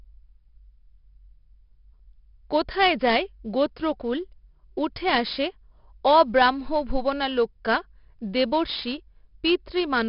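Speech, damaged throughout by heavy 4-bit ADPCM compression. Each sample is a coarse step from a prediction. The error is gritty hiss tracking every loud passage, with roughened attacks. Nothing is heard above 5.3 kHz, which points to a sample rate near 11 kHz and a 44 kbps stream.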